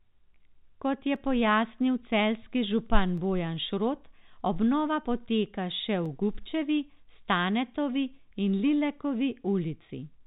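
A short speech clip carried over G.711 telephone coding, so nothing above 4 kHz comes through. Three sharp single clicks cut through it, at 1.16 s just before "pojasnil celjski župan", at 3.18 s right after "je pojasnil celjski župan", and at 6.06 s after "obnova poteka še". Each is likely dropped samples: a fraction of a millisecond goes missing, the waveform jumps straight to a later value, and you get a tick without losing any sound.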